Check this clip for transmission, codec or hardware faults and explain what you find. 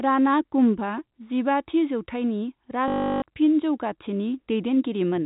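One transmission fault stands out. From 2.88 to 3.22 s, just after "कुम्भआ जिबाथि जौथाइनि", the speech turns into a robotic stutter with a buzz near 50 Hz. This is packet loss with the last packet repeated. About 340 ms of audio went missing, and the receiver kept replaying its final good packet, which fits 20 ms packets. The replays seldom line up with the pitch of the voice. The telephone-band G.711 coding is audible as a 4 kHz ceiling.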